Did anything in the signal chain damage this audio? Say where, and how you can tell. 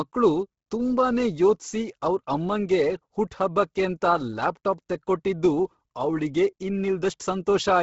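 Yes. The damage happens at the codec stage and runs through the whole speech clip. Nothing is present above about 7.7 kHz, and the upper band that remains has a heavy, breathy, grainy texture. The likely cause is Bluetooth LC3 compression at a low bitrate, consistent with about 16 kbps in 10 ms frames. The encoder discards most upper-spectrum detail and substitutes shaped noise, which produces the grain.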